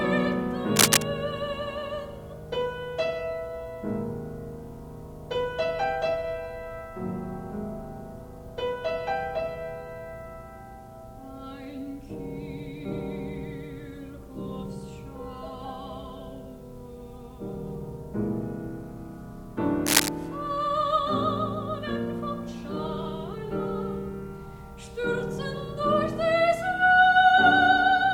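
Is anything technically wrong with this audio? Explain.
Yes, there's cable scratch noise in two spots: 0.76 to 1.02 s, sitting about 10 dB above the sound, and 19.86 to 20.09 s, about 5 dB above. Both are brief bursts of ragged scratching, likely from a worn cable or connector being moved and its contact resistance jumping around.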